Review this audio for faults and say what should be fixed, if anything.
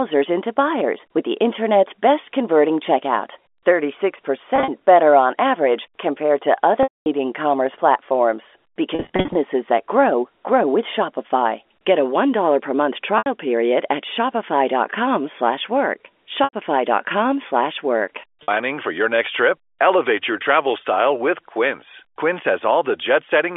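Brief buzzy, held tones, some fading toward silence, break the speech at 4.56–4.68 s, 6.83–7.06 s (after "on average compared to"), 8.95–9.35 s (scattered, before "that grow grow with"), 13.18–13.26 s, 16.44–16.53 s and 18.43–18.48 s (before "for your next trip"). This is packet loss with pitch repetition: lost audio, in steps that fit 10 ms packets, is covered by repeating the last pitch period and fading it out. A larger jitter buffer with forward error correction or redundant packets would prevent these gaps.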